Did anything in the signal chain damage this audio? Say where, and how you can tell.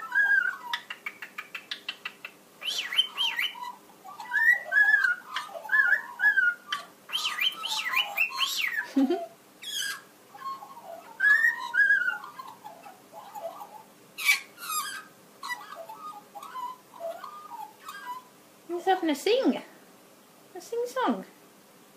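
No, nothing audible points to damage at any stage of the signal chain, from capture through to playback.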